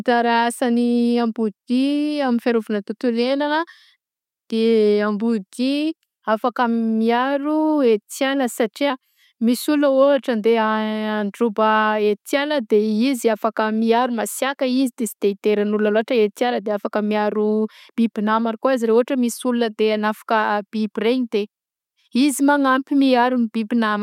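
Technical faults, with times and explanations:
No technical faults can be heard in this speech, so there are no times or explanations to give.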